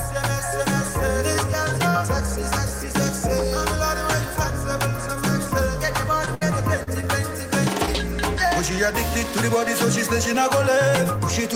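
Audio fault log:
6.25 to 6.29 s: short concealed packet loss. About 20 ms failed to arrive. The decoder extended the previous sound for 13 ms, giving a brief smear.
6.35 to 6.43 s: burst of packet loss. About 60 ms was lost in a row. The receiver held and faded the last sound for 64 ms, then resumed with that stretch missing.
6.83 to 6.89 s: short concealed packet loss. About 40 ms went missing. A 35 ms continuation of the prior sound covered the hole, heard as a short wobble.
7.01 to 7.08 s: short concealed packet loss. About 20 ms went missing. A 19 ms fill, plus roughly 10 ms of added time, gives a stretch and smear.
7.86 to 7.89 s: short concealed packet loss. About 20 ms went missing. A 13 ms extension of the preceding sound bridged it, leaving a brief smear.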